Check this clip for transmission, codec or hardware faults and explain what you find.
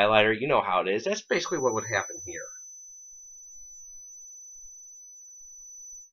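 One fault is present: a feedback whistle that starts at 1.23 s and continues to the end of the clip. A thin, steady tone at 6 kHz sits behind the sound, about 20 dB below it, swelling and fading slowly in level. The likely cause is a loudspeaker-to-microphone loop held just at the edge of feedback, so the tone keeps ringing without growing. On a spectrogram it appears as a narrow horizontal line at 6 kHz. The waveform shows no obvious change.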